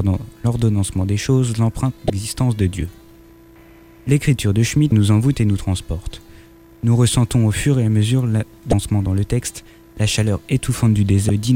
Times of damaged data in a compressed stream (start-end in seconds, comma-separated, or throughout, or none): 2.07-2.10, 4.89-4.92, 8.70-8.73, 11.26-11.30